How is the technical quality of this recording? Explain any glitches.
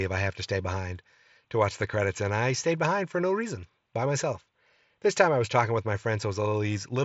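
The speech carries no glitches, and what can be heard of the Bluetooth mSBC headset path is its ordinary character: the audio stops at about 7.7 kHz, as wideband headset audio does, with only a light codec graininess on the louder sounds.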